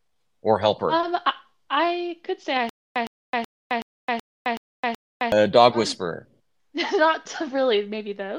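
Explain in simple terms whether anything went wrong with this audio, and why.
Between 2.69 and 5.32 s, right after "I could say I", the audio falls into a stutter with silent gaps. A short fragment of about 111 ms plays, then about 264 ms of dead silence follows, and this cycle repeats seven times at a steady rate of one every 375 ms. Normal sound resumes at "uh dog um whisperer". This is likely a playback or streaming stall, with each retry replaying the last fragment before running dry. The audio meant for that span is missing.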